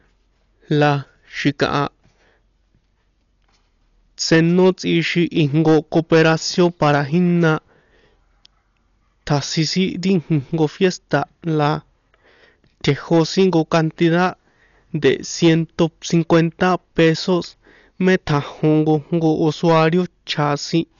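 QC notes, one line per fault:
throughout, hard clipping: the speech peaks are driven about 9 dB past the limit and cut flat, but only a small fraction of the waveform hits the ceiling. This produces a crackling grit on louder syllables rather than a steady fuzz, and its new high harmonics set it apart from codec damage.
throughout, Dolby Digital compression, likely the cause: the band stops dead at 6.9 kHz, leaving the speech dull, with a rough, fluttering noise clinging to voiced tones where empty spectral lines were filled with noise. The heavy damage fits a bitrate around 48 kbps. A plain low-pass would stay clean rather than fluttering.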